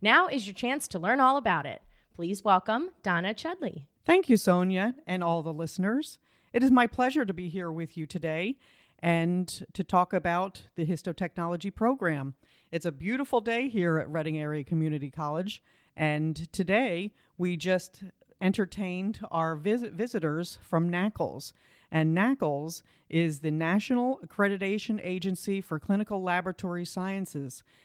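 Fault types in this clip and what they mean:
Nothing in this bit of speech sounds off to me, so there's really nothing here to flag.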